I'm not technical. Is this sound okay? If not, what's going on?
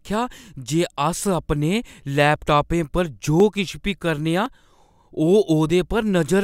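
No. There are four small jumps, at 2.36, 3.40 (just before "किश बी"), 4.46 and 5.70 seconds. Each time, the speech jumps forward by a tiny sliver. This is likely a dropped buffer (overrun): the recording software fell behind and a scrap of audio was lost.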